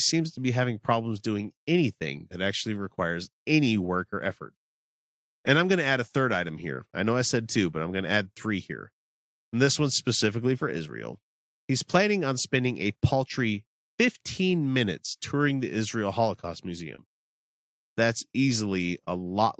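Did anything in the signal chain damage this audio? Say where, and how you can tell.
Yes, at the network stage. Two instances of a lost packet rebuilt from error correction, at 14.63 to 14.65 s and at 16.98 to 17.00 s, each about 20 ms, sound like a brief roughening and added graininess with no break in the sound. A single Opus packet went missing each time, and the decoder played the low-bitrate copy carried in the following packet. That continuity sets it apart from concealment, which invents audio rather than decoding a coarse copy.

The second event sits inside a short concealed packet loss from 16.95 to 17.00 s. About 20 ms of audio arrived too late, and the receiver filled roughly 23 ms by extending the preceding sound before crossfading back into real audio. That gives a short smear or wobble rather than the noisy texture of a rebuilt frame. Because the whole path is band-limited to 8 kHz, the error-correction copies lose no extra top end, so the roughness is the main cue.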